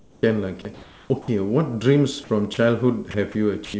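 Comfort noise in place of the background runs from 0 to 0.23 s and again from 0.74 to 1.10 s. The sender, likely under discontinuous transmission, stopped sending during pauses, and the receiver substituted smooth, featureless noise, about 14 dB quieter in the first gap and only about 1 dB quieter in the second.

Sound dropped by the voice detector occurs at 1.22–1.28 s, 2.54–2.57 s, 3.11–3.14 s and 3.65–3.74 s. Stretches of sound, 30 to 50 ms each, were likely judged to be background, so brief bursts of steady noise replace them before the speech resumes. Throughout, nothing is heard above 8 kHz, which fits a wideband call codec.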